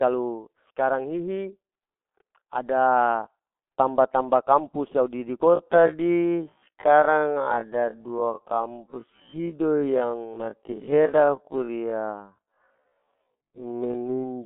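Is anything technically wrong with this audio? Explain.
Yes, two faults. Throughout, the speech has the G.723.1 codec sound: muffled and hoarse, limited to 200 Hz to 3.5 kHz with nothing above 4 kHz. Heavy damage from coarse 30 ms frames, consistent with a roughly 6 kbit/s stream, blurs consonants. From 5.46 s to the end, the pace abruptly drops to half speed while pitch stays fixed. The dragging result likely comes from a time-stretched section, padded by repeating short pieces of audio.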